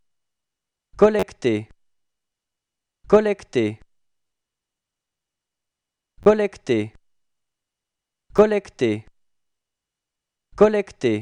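Repeated buffer at 1.20, 2.46, 4.28, 6.23 and 8.37 s: audio arrived late, so the last 10.7 ms block, which fits a 512-sample buffer, replayed one to three times as brief buzzing clicks.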